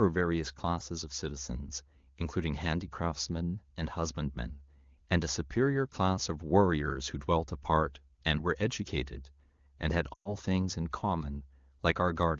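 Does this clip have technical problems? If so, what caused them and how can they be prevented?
Yes. From 10.13 to 10.35 s, lost AMR speech frames drop about 120 ms of signal. The wideband decoder repeated its last good pitch and vocal tract settings with falling gain, so the sound smears, then fades. A spectrogram shows frozen harmonics thinning to a near-blank gap; the waveform decays, then resumes weak. Better radio coverage and stronger channel error protection prevent this.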